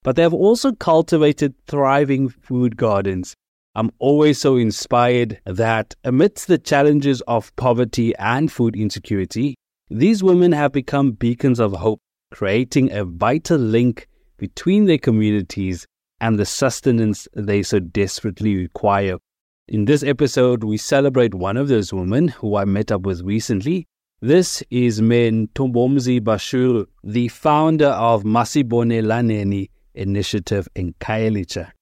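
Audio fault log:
No faults detected.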